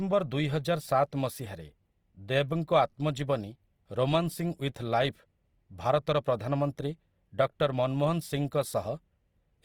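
Throughout the speech, the likely cause is Opus compression in its CELT music mode at a rate that fits 24 kbps. Band energies are kept but fine detail is filled in, so the sound is plainly grainy and rough, though it still extends to 20.2 kHz.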